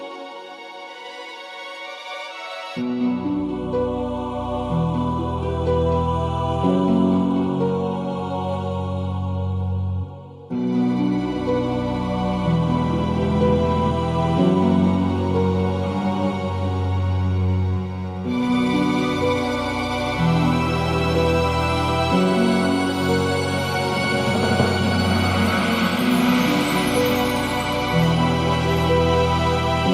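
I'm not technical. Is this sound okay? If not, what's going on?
Yes, the sound is fine; nothing here needs fixing.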